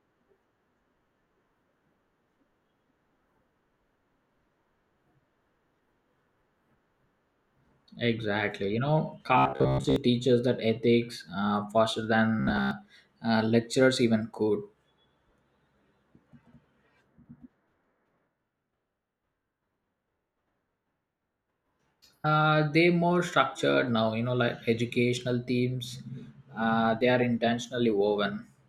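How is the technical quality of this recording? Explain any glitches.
The speech has two short glitches of robotic sound from repeated short buffers, at 9.38 to 9.96 s (just before "teaches that ethics uh") and 12.40 to 12.71 s (between "that ethics uh faster" and "uh lecturers even could"). The voice becomes a rigid, metallic 66.7 Hz buzz, likely from starved audio delivery looping a roughly 15 ms fragment over most of each stretch.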